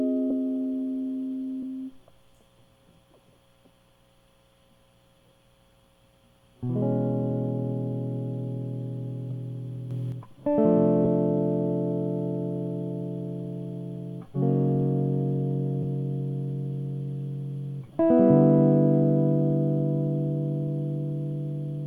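At 9.91 s the music steps up by about 5 dB with no ramp, holds there until 10.12 s, then drops back just as abruptly. This sudden gain jump is likely a digital gain change applied between adjacent samples, lifting everything in the mix at once.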